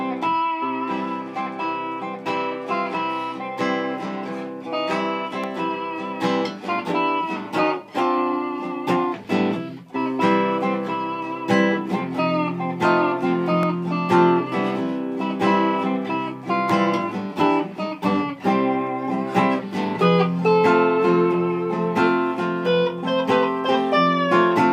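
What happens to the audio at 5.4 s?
At 5.44 s there is a single sharp click, a brief vertical line across the spectrum. The likely cause is dropped samples: a fraction of a millisecond of the stream goes missing, so the waveform jumps abruptly to a later value, too briefly to remove any audible sound.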